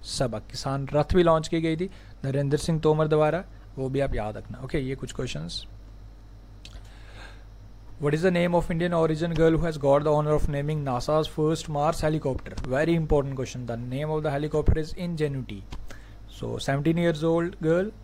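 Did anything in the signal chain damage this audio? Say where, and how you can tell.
Yes. A loud pop, two in quick succession between 12.65 and 12.86 s, peaks about 10 dB above the audio, which carries on beneath it. That points to a voltage pulse, likely from the analogue wiring or a switch, rather than a dropout, which would interrupt the sound.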